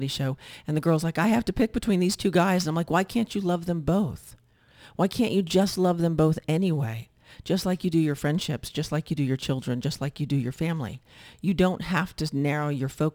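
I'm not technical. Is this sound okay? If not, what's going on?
No, there's crude rate conversion throughout. The speech was resampled by simply grabbing the nearest samples, leaving a gritty, buzzy fizz that clings to louder, brighter sounds.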